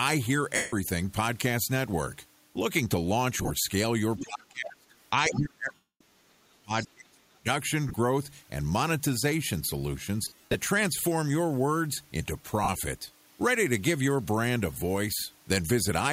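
Lost LE Audio frames at 0.56–0.74 s: a 165 ms gap where the decoder repeats the last spectrum with scrambled phase, smearing the sound into noise before it fades.

Lost LE Audio frames again at 3.38–3.50 s: scattered dropouts with the longest run around 30 ms, heard as brief noisy blurs.

Other side's voice leaking through at 4.18–4.24 s: a second voice about 10 dB below the speech, likely echo the canceller failed to remove from the microphone.

Speech suppressed in double talk at 4.19–4.94 s: the speech dips by up to about 30 dB and loses pieces, likely because the echo canceller mistook it for loudspeaker echo while both sides talked.

The same suppression returns at 5.26–7.47 s, with drops up to about 35 dB. Within it, lost LE Audio frames at 5.74–6.01 s leave a 262.5 ms smear that dies away toward silence. At 6.82–6.87 s the other side's voice leaks through again, about 20 dB below the speech.

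Further lost LE Audio frames come at 7.88–7.96 s (scattered, longest run around 20 ms), at 10.23–10.55 s (240 ms lost in clusters, longest run around 70 ms) and at 12.63–12.69 s (45 ms). Each one briefly turns the sound into a noisy smear.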